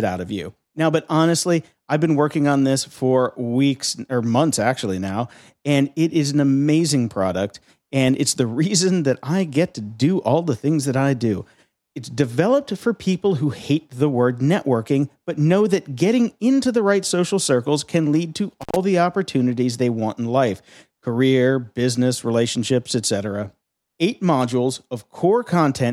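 A speech recording marred by an intermittent contact: a loose cable or plug in the signal chain briefly lost connection at 18.61 s and recovered by 18.76 s. For roughly 99 ms of that window the line was open, so the speech drops out abruptly, with crackle where the connection breaks and remakes at each edge. A faint hiss fills the gap before the signal snaps back.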